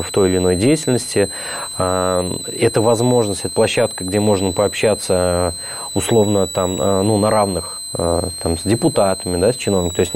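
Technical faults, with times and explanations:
Throughout, switching supply whistle: a high, thin whistle near 4 kHz sits under the sound, wandering between about 3.9 and 4.2 kHz, and stays quite prominent at roughly 10 dB below the programme. A switching power supply is running in an audible burst mode or beating with another supply, so its pitch follows the changing load. That drift sets it apart from a fixed test tone or from mains hum, which stays low and locked.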